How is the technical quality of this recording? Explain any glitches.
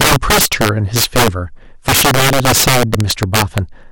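The recording is badly damaged by integer overflow running through the whole speech clip. The signal path pushes the level about 15 dB past full scale, and instead of being limited, each sample beyond the largest integer wraps around to the opposite sign. Around 7 percent of samples cross that limit, so the loud peaks contain instants where the waveform jumps from one extreme to the other. Those jumps are heard as violent, sharp cracks on the louder sounds, much harsher than ordinary clipping distortion.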